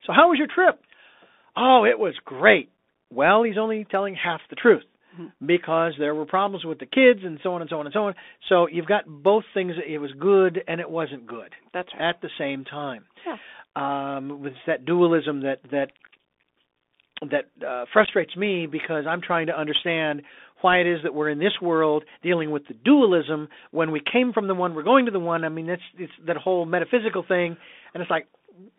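Throughout, the Bluetooth CVSD headset codec confines the speech to roughly 250 Hz–3.6 kHz, consistent with a 64 kbps CVSD link, leaving scratchy sibilants and granular hiss. From 18.05 to 18.09 s, between "that uh" and "me because I'm trying", unconcealed Bluetooth headset packet loss drops a handful of packets, about 19 ms within 30 ms, causing brief holes with abrupt edges.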